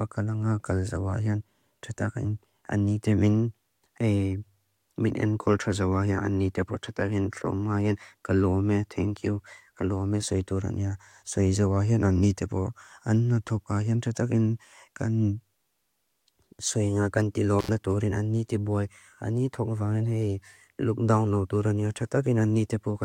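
Around 17.59 s there's an intermittent contact: a loose plug or cable briefly opens, so the speech drops out for roughly 80 ms until about 17.69 s. You hear crackle as it breaks and reconnects, with faint hiss in the gap.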